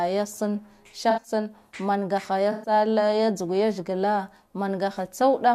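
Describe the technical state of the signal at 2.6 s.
At 2.6 s the signal is inside a corrupt frame concealed fault, running from 2.52 to 2.72 s, just after "mangaha ya". Damaged bits in the AAC stream were caught by the decoder, which covered the roughly 0.2 s span, enough for about five frames, either by muting it or by reusing the last good spectrum with scrambled signs. Unlike a raw dropout or splice, the replacement comes from the decoder itself rather than from a plain gap in the data.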